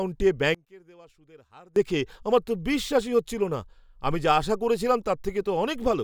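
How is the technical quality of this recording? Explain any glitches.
The recording has one clear fault. From 0.55 to 1.76 s the speech drops by about 27 dB, leaving a faint residue. This points to one channel inverted: the likely cause is one stereo channel with reversed polarity, so the shared centre content cancels when summed to mono.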